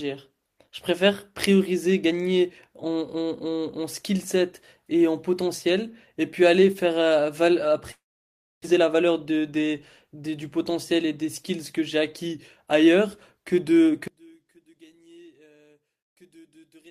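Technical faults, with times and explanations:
7.91–8.66 s, long network dropout: the sound decays into a fading buzz, then about 0.64 s of silence; roughly 0.6 s likely never arrived and is skipped.
8.73–9.74 s, jitter buffer speed-up: the speech runs about 110% fast at unchanged pitch as the receiver trims short pitch periods, shedding roughly 0.1 s of built-up delay.
14.08–16.9 s, one channel inverted: summed to mono, centred speech drops by about 31 dB to a faint residue, likely because one channel's polarity is reversed.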